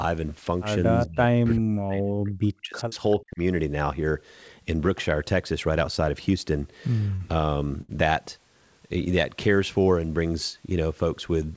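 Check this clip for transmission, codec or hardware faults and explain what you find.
Three kinds of fault are present: speech suppressed in double talk, an echo leak, and two short stalls from late packets. The audio has no content above 8 kHz.

Speech suppressed in double talk, 1.05 to 2.92 s and 3.17 to 3.4 s. The speech dips and breaks up, up to about 40 dB down. This is likely because an echo canceller mistook overlapping talk for echo.

Echo leak, 2.94 to 3.14 s. A faint copy of the speech returns 392 ms late, about 25 dB down. This is likely residual loudspeaker echo that the loudspeaker side's canceller missed.

Short stall from a late packet, 7.16 to 7.22 s and 7.81 to 7.91 s. The sound is held for 42 ms and then 73 ms. The jitter buffer stretched audio while waiting for a packet, so nothing is lost.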